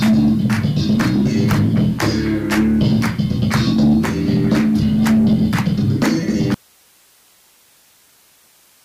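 At 6.55 s the sound cuts abruptly to faint hiss, roughly 35 dB down, and stays there to the end: an audio dropout to a faint residue, likely a lost feed on a still-live path, not a fade.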